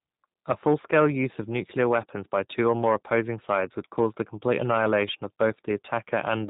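Speech, coded throughout with the G.729 codec, and the coding damage is plainly audible. Nothing passes above about 3.8 kHz, so sibilants and breath detail are missing. The voice is rebuilt from a vocal tract filter, a pitch predictor and a sparse set of excitation pulses in each frame, which fits an 8 kbit/s codec. That sparse excitation is what gives the sound its rough, slightly synthetic texture across the whole clip.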